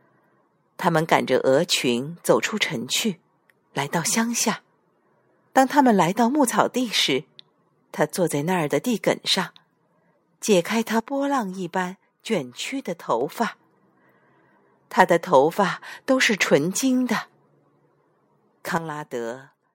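A sudden gain jump, likely a gain change applied without a ramp, drops speech and background noise together by about 6 dB from 11.0 to 13.21 s, and about 10 dB from 18.78 s.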